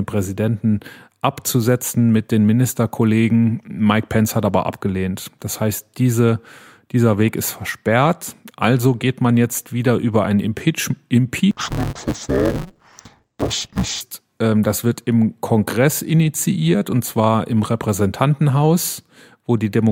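From 11.51 to 14.01 s, interleaved audio is being read as planar. Each short block of about 5.33 ms, which fits a 256-sample block, has its first half taken as left and second as right. The speech turns dull and robotic, buzzing at 188 Hz, without a clear octave drop.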